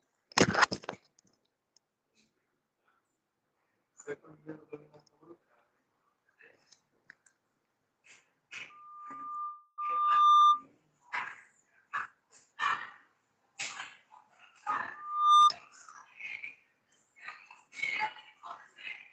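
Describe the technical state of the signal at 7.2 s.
At 7.2 s the signal is intact, with nothing beyond the ordinary coding character and upper-band limit of the call path it passes through.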